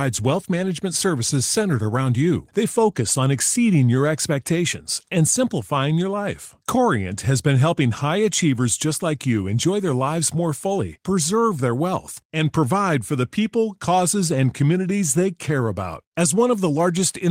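No technical faults can be heard anywhere in the speech recording.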